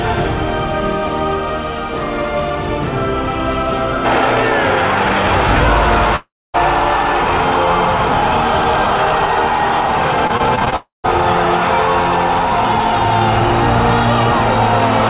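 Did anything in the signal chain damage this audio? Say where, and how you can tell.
Yes. Repeated packet loss (robotic sound) runs from 10.27 to 10.76 s. There are seven short holes, the longest 21 ms, and each one is patched by extending the preceding sound. About 22% of that half-second is filler, so it turns choppy. The damage comes in at the network stage and passes through the call's jitter buffer, on a path whose G.711 A-law coding leaves nothing above 4 kHz.

Long network dropouts occur at 6.16 to 6.56 s and 10.76 to 11.06 s. Each time the last sound stretches into a fading buzz or hiss, then goes silent for about 250 ms and 150 ms respectively. Audio resumes with roughly 380 ms and 280 ms lost, likely a network outage that concealment covers before muting.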